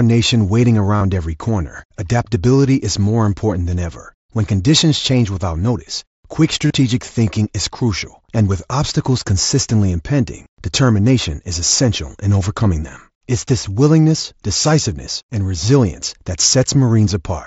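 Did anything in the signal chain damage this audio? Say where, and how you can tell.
Yes, concealed Bluetooth headset packet loss on the wireless link. At 0.96 s, after "nation waiting", and at 6.67 s, after "change without notice quick", a short buzzy tone replaces the speech for 45 and 30 ms. The phone filled each gap by repeating recent waveform.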